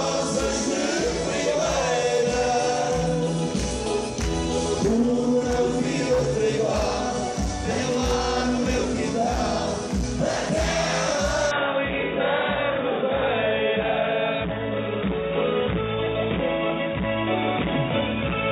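At 11.51 s the audio abruptly turns dull and boxy and stays that way to the end, with nothing above about 3.8 kHz from that point on. There is no gap at the change and the loudness holds roughly steady, but a faint new background noise appears well below the signal. The likely cause is the input switched to a poorer device mid-recording, such as a narrower-band microphone or a headset's call profile.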